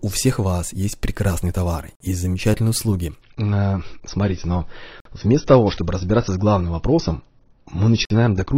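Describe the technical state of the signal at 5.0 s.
At 5.0 s the adaptive stream is playing at a lower bitrate. After "товар и замечательные услуги", at 3.22 s, the connection slowed and the player switched to a leaner encoding, which fits a drop from 96 to 24 kbit/s AAC. From there to the end, nothing remains above 6.6 kHz and codec artefacts rise, with a sudden change and no break.

Inside that stretch there is also a gap between chunks, from 5.00 to 5.05 s. Where two stored chunks join, playback leaves 50 ms of silence, which matches chunks about 3 s long. No sound is lost, but it is interrupted by a short hole at the join.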